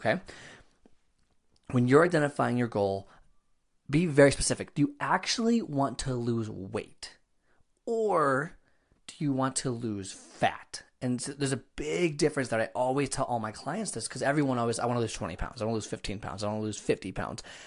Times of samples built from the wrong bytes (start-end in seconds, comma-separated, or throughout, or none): none